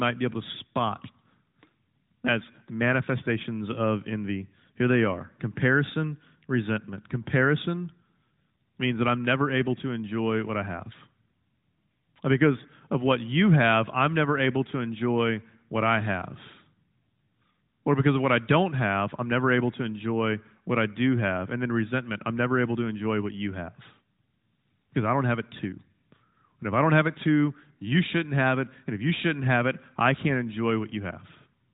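No faults found in this speech clip; it is band-limited to about 3.8 kHz, as expected from the AMR-NB mobile codec running at 12.2 kbps.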